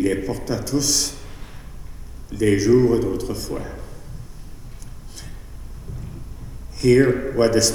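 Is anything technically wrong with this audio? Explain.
Yes. Throughout the clip there is sample clock jitter: the converter's clock wanders by roughly a microsecond or two, so each sample is taken slightly off time. The error scales with waveform slope, sitting about 35 dB below the signal, and is heard as a hiss or roughness that grows on loud, bright passages and disappears in silence.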